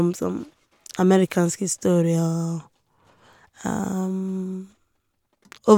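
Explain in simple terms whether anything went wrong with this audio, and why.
Nothing went wrong here: the speech comes through without any audible dropout, glitch, distortion or other technical fault at any point.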